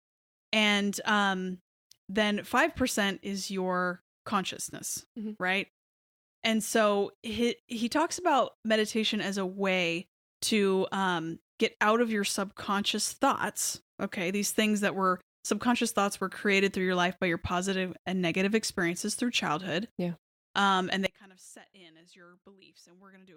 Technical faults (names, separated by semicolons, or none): audio dropout to a faint residue